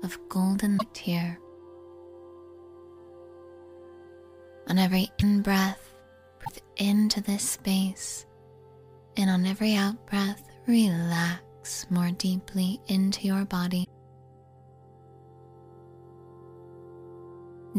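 Four brief glitches interrupt the audio, at 0.77–0.83 s, 5.19–5.23 s, 6.44–6.50 s and 13.83–13.88 s, each a sudden skip with a roughly 50 ms disturbance, about two 26.1 ms frames. Likely cause: a broken MP3 bit reservoir after lost frames.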